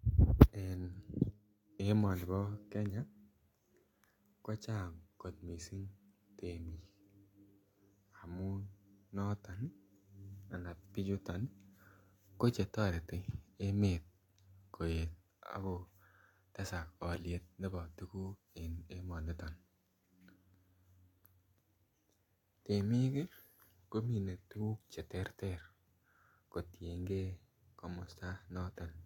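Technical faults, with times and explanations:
Nothing stood out on listening; the speech comes across without any audible technical problem.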